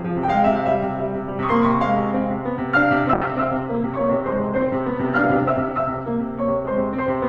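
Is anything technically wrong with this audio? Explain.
Yes. From 3.15 to 6.15 s the music turns muffled and rough, with its top end cut off at about 8 kHz instead of reaching 20 kHz. This is a call bitrate drop. The encoder was squeezed to far fewer bits, consistent with falling from roughly 48 to 9 kbps, so it coded coarsely and discarded high frequencies for nearly three seconds.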